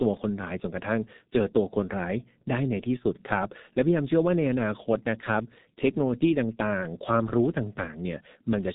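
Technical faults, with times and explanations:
Throughout, G.723.1 codec: the speech is heavily damaged by this low-rate telephony codec, with nothing above about 3.8 kHz, so sibilants and crisp consonants lose their energy and blur together. The coarse, hoarse texture points to a bitrate near 6 kbit/s, where the codec rebuilds speech from a simplified model refreshed only every 30 ms frame, so rapid articulation is smeared and the voice sounds muffled and rough.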